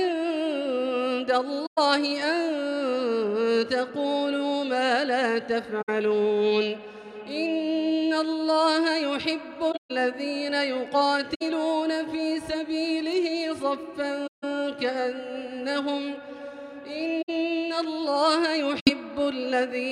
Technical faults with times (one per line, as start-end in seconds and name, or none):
1.65-1.78 corrupt frame concealed
5.81-5.89 corrupt frame concealed
9.71-9.91 corrupt frame concealed
11.34-11.42 corrupt frame concealed
14.26-14.44 corrupt frame concealed
17.21-17.30 corrupt frame concealed
18.79-18.90 corrupt frame concealed